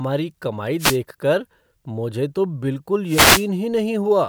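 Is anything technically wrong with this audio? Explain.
Yes. Wireless microphone noise hits at 0.78–0.98 s and 3.06–3.48 s: reflections fade the FM radio signal, so receiver static swishes over the speech instead of a digital dropout's silence.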